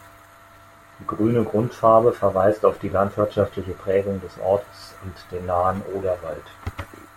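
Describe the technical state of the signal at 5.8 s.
At 5.8 s the speech signal is intact, with no audible fault at that point.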